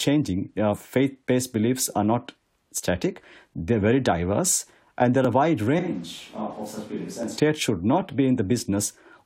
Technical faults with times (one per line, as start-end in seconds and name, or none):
3.23 overlap between stream segments
5.25 overlap between stream segments
5.79-7.37 switch to a distant microphone
7.23 overlap between stream segments